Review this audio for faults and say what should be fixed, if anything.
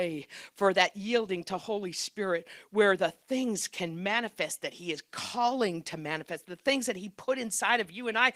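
No faults turn up in the audio, so nothing needs to be fixed.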